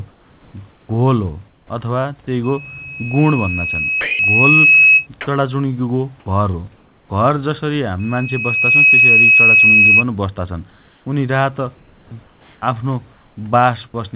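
From 0.11 to 1.7 s the room background gives way to comfort noise: a steady, featureless hiss, lasting about 810 ms in total. The sender's voice detector likely judged the pause as silence and stopped sending, so the receiver synthesised noise shaped roughly like the background. Unlike a true silent gap, the hiss never drops to nothing. Unlike real room noise, it has no texture or movement.

A loudspeaker feedback squeal starts at 2.44 s and runs to 5.07 s. A single tone at 2.6 kHz swells over roughly two seconds and ends up about 10 dB above the speech. The microphone is picking up the loudspeaker it feeds, and at that one frequency the loop gain has passed unity. It is a pure, growing pitch rather than broadband noise, and it sits well inside the call's band, which stops at 4 kHz, consistent with 64 kbps G.711 A-law.

Inside that squeal, from 4.01 to 4.19 s, 180 ms of speech is dropped by the voice detector and replaced with steady noise, likely because the detector mistook the quiet stretch for background. 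At 6.20 to 6.26 s a shorter drop costs about 30 ms of speech. These are holes in the speech itself, not swaps of the pause background.

At 5.25 to 5.27 s the onset is clipped by the voice detector. The first 20 ms of the sound is missing, so it begins abruptly without its soft rise. The detector was likely slow to register that sound had resumed. Only the attack is lost, not a whole segment.

From 6.2 to 7.1 s the background is again replaced by comfort noise, about 390 ms of it, with the same flat, smooth character as at the start.

The squeal returns from 7.99 to 10.04 s at 2.6 kHz and about 10 dB above the speech. This time it builds much faster, in under a second.

From 10.7 to 13.94 s the sound is chopped by the voice detector, with about 1.41 s replaced in total. The detector likely toggled repeatedly, so quiet syllables and word edges vanish into fill. The toggling back and forth is what separates it from a single drop.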